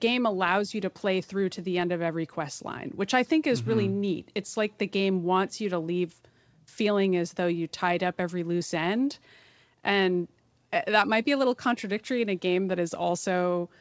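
There are no technical faults to describe in this speech, which comes through a call path whose codec leaves nothing above 8 kHz.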